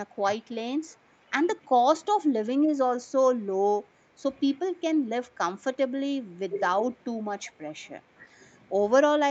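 The clip is speech, with an upper limit of 8 kHz set by the call path. The speech dips briefly at 0.06–0.11 s and 0.36–0.41 s, by about 10 dB. It dips harder at 1.9–1.96 s, by about 25 dB, and at 6.37–6.56 s, by about 20 dB. This is likely speech suppressed in double talk. The echo canceller could not separate the local talker from the far side and turned both down. At 1.12–1.3 s the room sound drops by about 6 dB for roughly 150 ms. That is background gated by the echo canceller, which clamped the microphone while the loudspeaker played. At 7.44–7.52 s a faint delayed copy of the speech appears. It sits about 30 dB below the speech and trails it by 348 ms. This is likely an echo leak, where the far side's canceller let some loudspeaker pickup return.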